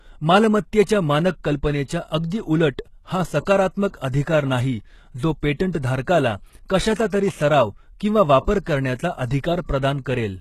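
Throughout the speech, the treble sounds rebuilt rather than recorded: s sounds come out gritty and lispy, with a metallic edge. This is likely HE-AAC compression, copying lower bands upward, and the plainly audible damage fits a bitrate near 16 kbps. A spectrogram shows smeared, repeated high-band texture stopping flat at 12.3 kHz.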